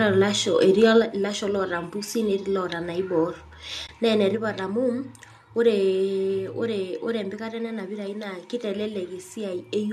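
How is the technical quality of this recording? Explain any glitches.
The recording has three kinds of glitch: a brief distortion from the microphone being driven too hard, two sudden drops in level, and one short dropout.

Microphone overload, 0.83 to 0.85 s: the input was likely set too high, so the converter ran out of range and the peaks, pushed about 2 dB past full scale, had their tops sliced flat. A noticeable share of the waveform is flattened, giving that loud moment a harsh, crackly edge.

Microphone volume stepped down, at 1.02 s and again at 4.35 s: the calling software apparently judged the input too hot and cut the device's gain in a single step, by about 4 dB the first time and about 3 dB the second. Speech and background both drop abruptly, the first drop coming just after the distorted peak.

AAC frame loss with muting, 3.87 to 3.89 s: about 20 ms of coded audio went missing, which points to two lost frames. 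The decoder filled the gap with silence, and the overlapping windows fade the sound out and back in, leaving a soft-edged hole.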